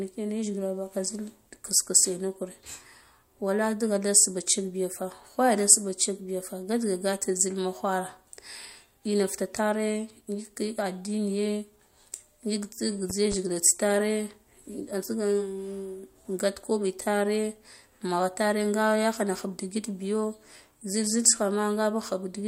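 From 13.10 to 13.35 s, a loud pop: two sharp thumps above the speech, which continues beneath, unlike dropouts; likely an electrical voltage pulse.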